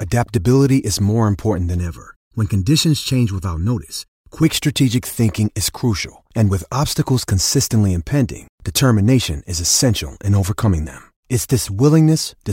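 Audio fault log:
1.78–4.43 s, channel delay (comb filtering): after "is more important than", the speech turns hollow and phasey until "strategic thinking is crucial". One channel lags by under a millisecond, so mono summing cancels evenly spaced frequencies, the first notch falling near 700 Hz.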